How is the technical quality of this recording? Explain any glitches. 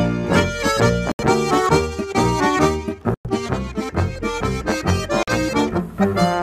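Three short silent gaps interrupt the audio, at 1.12 to 1.27 s, 3.14 to 3.27 s and 5.23 to 5.32 s. They are likely Bluetooth dropouts: late packets were discarded, so playback cuts out abruptly and resumes further along.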